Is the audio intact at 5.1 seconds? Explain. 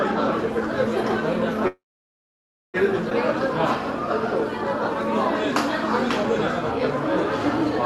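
No. A 50 Hz buzz with hash above it sits roughly 20 dB below the sound from 0.32 s to the end: video or display buzz from a screen or cable coupling in.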